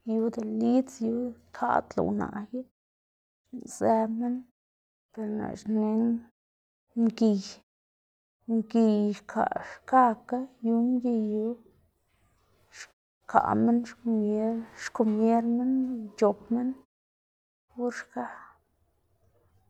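This is a speech recording, and nothing is technically wrong with it.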